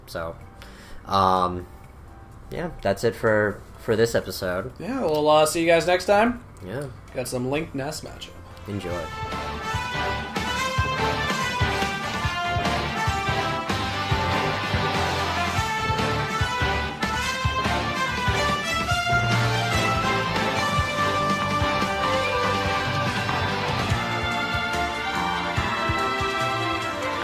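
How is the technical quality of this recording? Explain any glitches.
The technical quality of this recording is sound, with no glitches to explain.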